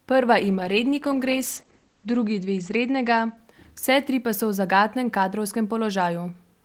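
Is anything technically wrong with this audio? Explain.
Yes. A call bitrate drop runs from 0.40 s to 5.33 s. The connection's bandwidth estimate fell, so the encoder was forced to spend far fewer bits. The sound points to a fall from around 32 kbps to 12 kbps, bottoming out for about 1.9 s. Coding becomes coarser, and the top end narrows from 20 kHz to 8 kHz, so the speech turns muffled and rough, with a watery texture, until the bitrate recovers.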